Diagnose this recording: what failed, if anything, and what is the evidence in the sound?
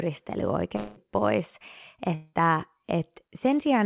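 Network stage, likely a long network dropout: at 0.76–1.05 s and 2.15–2.35 s, a fading concealment buzz covers about 200 and 180 ms of lost audio.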